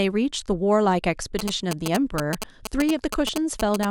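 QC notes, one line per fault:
1.39–3.85 s GSM signalling bursts: a nearby phone's rectified radio bursts give a galloping dit-dit-dit of short 217 Hz buzzes, only slightly below the speech, gated in groups, unlike steady mains hum.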